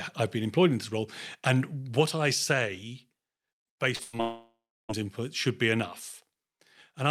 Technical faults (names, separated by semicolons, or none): short concealed packet loss; burst of packet loss; long network dropout